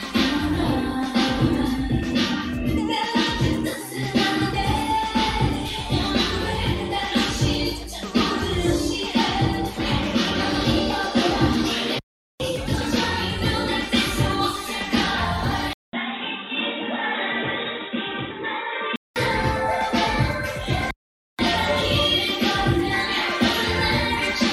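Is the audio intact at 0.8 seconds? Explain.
Yes, at 0.8 seconds the audio is intact, with no dropout, click, distortion or other fault at that point.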